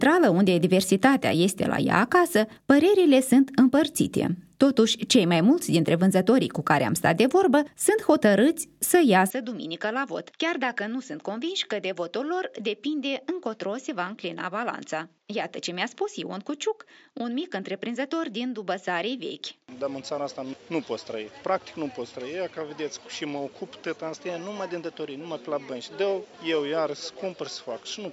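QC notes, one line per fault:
9.3–28.1 s: input switched to a poorer device. Sound drops about 10 dB, nothing above 7.6 kHz, faint new background noise, no gap; likely another microphone.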